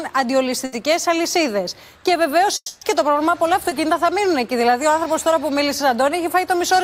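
A burst of packet loss hits this audio at 0.65 to 0.73 s. About 70 ms of packets failed to arrive in time, so the receiver stretched the last sound into a fading buzz or hiss, and playback resumes further on with that 70 ms missing. From 2.56 to 2.82 s the sound carries on as a decaying buzz or hiss that ends in roughly 40 ms of silence, about 250 ms in all, then returns with about 250 ms of material gone. The likely cause is a long network dropout. At 3.69 to 3.72 s a short concealed packet loss leaves a brief smear or wobble, where the decoder extrapolated the previous sound across a 20 ms hole and crossfaded back into the real signal.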